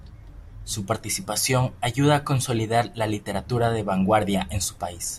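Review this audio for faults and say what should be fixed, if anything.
No faults found in the speech; nothing to fix.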